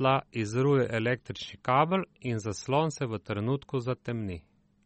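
From start to finish the speech sounds watery and swirly, and nothing comes through above about 8.4 kHz. That's likely MP3 compression at a very low bitrate, something like 32 kbps. The encoder ran short of bits, chopped the treble and let weak detail flicker in and out.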